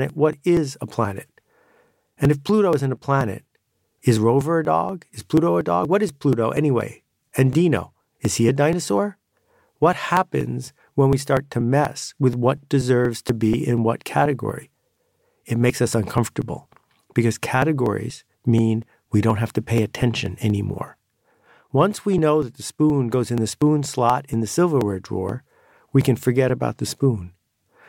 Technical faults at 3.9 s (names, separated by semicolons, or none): periodic USB or driver dropouts